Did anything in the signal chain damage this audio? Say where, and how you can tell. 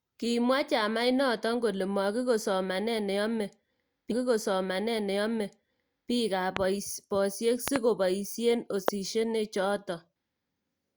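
Yes. At the playback stage, a stream segment repeated: just after "makikoi somanee ne yomee", at 4.11 s, the audio jumps back and replays the same material through 6.11 s, adding 2 s to the programme. A small blip marks the seam where playback restarts. That points to the player fetching or queuing one segment twice, so a whole chunk of already-delivered audio is played out again before the stream resumes its normal order.

Four loud pops sit on top of the speech, each peaking roughly 20 dB above it while the speech continues underneath. There is a single pop at 6.57 s, a close double pop from 7.68 to 7.78 s just before "ko boisie", and another single pop at 8.88 to 8.90 s right after "ko boisie". Each is a short, sharp transient added to the signal rather than a gap in it, likely a voltage step or spike in the analogue wiring or a driver glitch.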